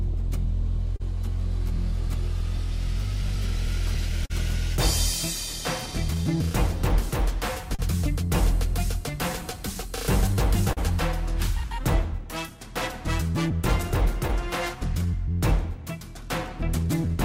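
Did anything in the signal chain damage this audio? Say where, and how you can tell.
Yes, and it's all in the network and jitter-buffer stage. The big one is clock drift between sender and receiver. The far end's clock runs slow, by something like 3 percent, so the buffer keeps draining. That's the root of the timing hiccups scattered unevenly through the whole clip rather than clustered at one spot. None of it sounds like a wiring or converter problem. It's all timing.

You can hear the receiver fighting that drift as repeated timing corrections from about 0.08 s right through to 17.09 s. It plays at roughly 98 percent speed, padding in small stretched pieces that add up to something like 400 ms over the run. Each edit is tiny, always leaning the same way.

There's a short stall from a late packet at 0.96 to 1.02 s. The buffer ran dry and the receiver held the last sound for 35 ms until the packet turned up, then carried on from the same point. 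Nothing is lost, but that moment lingers a touch too long.

Between 3.67 and 4.32 s it gets worse: repeated stalls, a stutter. The buffer emptied three times, with 51 ms filled in total and the longest hold at 43 ms, about 8 percent of that stretch. Again nothing is missing, but the sound catches and drags in little jerks, because packets were arriving more slowly than they were being played out.

Then there are scattered short gaps at 7.22 to 7.81 s, about three of them totalling around 40 ms, and at 10.20 to 12.50 s, roughly four totalling about 50 ms. These are isolated late or lost packets patched by continuing the last sound, so the audio stays mostly clear between the gaps.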